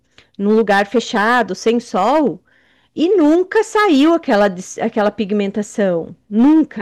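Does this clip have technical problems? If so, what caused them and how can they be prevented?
Yes, there's hard clipping throughout: the speech is driven about 7 dB past what the signal path can hold, so roughly a small percentage of samples get sliced flat, and those squared-off peaks throw up a harsh crackly edge on louder syllables. Leave proper headroom by setting input gain so peaks stay well under full scale.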